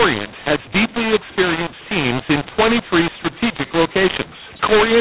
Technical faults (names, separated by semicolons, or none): mu-law and A-law mixed up